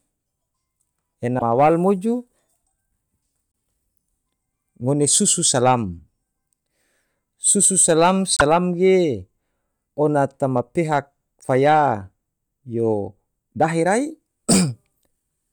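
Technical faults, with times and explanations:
1.38–1.42 s, 3.52 s, 8.37–8.41 s, 11.41–11.44 s, 14.51–14.54 s: broken MP3 bit reservoir. Speech skips ahead with brief glitches, one or two 24 ms frames long, likely from dropped frames leaving successors reading wrong reservoir bytes.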